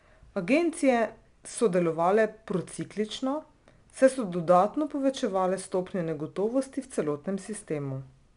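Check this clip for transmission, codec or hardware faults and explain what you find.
One codec fault runs through the whole speech clip: 4-bit ADPCM compression. Each sample is coded as a small 4-bit step from a predicted value, with the step size adapting continuously, and the resulting quantisation error rides along with the signal level. It is plainly audible as gritty hiss on the louder speech and roughness on sharp onsets. Nothing is present above about 10.6 kHz, which fits a sample rate near 22 kHz and a data rate around 89 kbps, dulling the top end.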